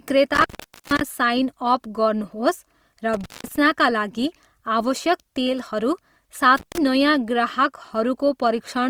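Speech runs through the whole clip with a rough, grainy texture: sustained sounds take on a noisy, sandpapery edge, with little of the swirling character of MP3. The damage is plainly audible, yet the bandwidth stays full, with content reaching about 20.2 kHz. This points to Opus compression in its music (CELT) mode, likely at a rate around 24 kbps, where the encoder keeps each band's energy but runs short of bits to describe it. The sound then cuts out three times: from 0.34 to 1.01 s, with the line open for about 450 ms; from 3.14 to 3.56 s, open for about 190 ms; and from 6.57 to 6.78 s, open for about 150 ms. Each dropout is bracketed by crackle as it starts and ends. This is an intermittent contact, a loose plug or cable briefly breaking the signal path and scraping as it reconnects.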